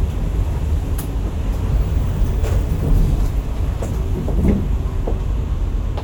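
No technical faults can be heard in this sound.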